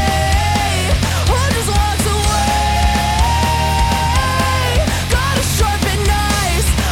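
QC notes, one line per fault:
No faults were found in this audio. There is nothing to log against it.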